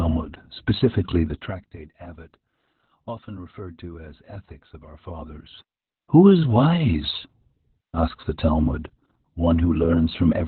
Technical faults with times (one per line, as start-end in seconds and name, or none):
0.00-10.48 Opus voice compression